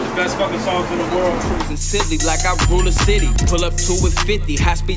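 Throughout the clip, the 48 kHz to 16 kHz conversion is being run with the resampler restarted on every block, each 20 ms chunk filtered in isolation with no memory of the one before. The filter therefore sees false data at every block edge, leaving a small discontinuity there. Repeating at 50 per second, those errors merge into a low buzz at 50 Hz riding on the audio, present whenever there is signal and gone in silence.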